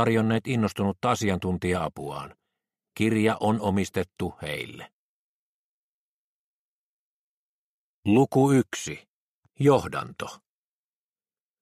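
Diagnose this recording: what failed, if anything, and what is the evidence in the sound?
A single sharp click at 3.68 s, a thin vertical line across the spectrum, points to dropped samples, likely a driver or buffer glitch skipping a fraction of a millisecond.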